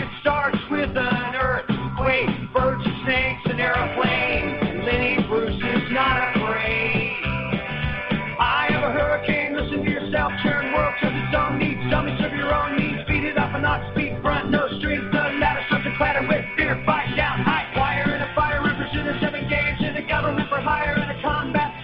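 Nothing in the audio stood out as a technical problem on listening.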